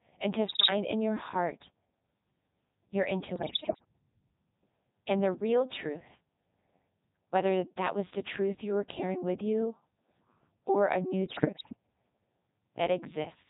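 The whole clip runs through a Codec 2 vocoder at 3.2 kbit/s, and it's heavily damaged: the decoder rebuilds speech from pitch, voicing, energy and a spectral envelope using sine waves, so the real waveform is gone and everything sounds buzzy and robotic.

On top of that, there are bursts of bit errors on digital voice radio. The first, from 0.48 to 0.70 s, falls between "and to" and "in your heart" and is the roughest, with something like one bit in seven flipped. The second runs from 3.36 to 3.85 s, and the third from 11.26 to 11.76 s, right after "or a new", both with lower error rates. Each corrupted frame gets the wrong pitch, level or spectrum, so the voice lurches and warbles into bleepy gibberish.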